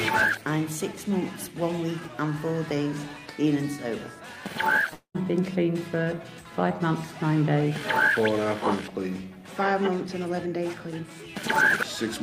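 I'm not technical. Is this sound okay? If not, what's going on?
No. From 4.93 to 5.17 s the sound stalls: a brief fading buzz, then about a tenth of a second of silence, before it carries on where it left off. This call audio freeze was likely caused by delayed network packets, so nothing was lost, only delayed.

From 10.07 to 12.19 s the sound plays about 10% faster without changing pitch, so it feels rushed. This is a jitter buffer speed-up: the receiver trimmed tiny slices, about a fifth of a second in total, to catch up on the earlier delay.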